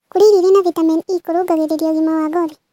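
Throughout, a wrong sample rate plays the speech 1.5 times fast and 7 semitones high, fitting 32 kHz audio run at 48 kHz. Unlike pitch shifting, tempo and pitch rise together.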